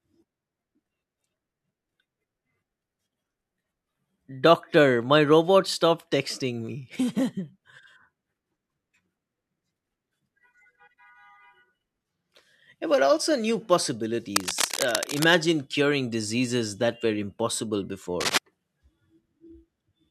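From 14.36 to 15.27 s, just before "curing diseases that were", and again from 18.20 to 18.38 s, right after "diseases that were impossible", cable scratch noise rasps over the speech, first a little below its level, then about as loud. This is likely a worn lead or connector being moved so its contact flickers. Unlike isolated clicks or steady hiss, it comes as dense, uneven rustling bursts.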